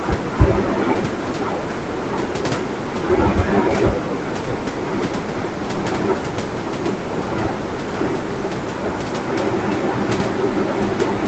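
No technical faults are audible.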